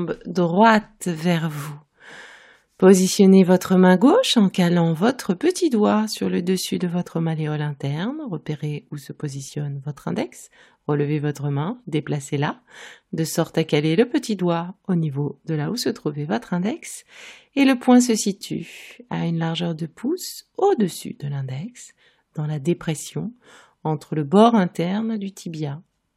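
No technical faults can be heard anywhere in the recording.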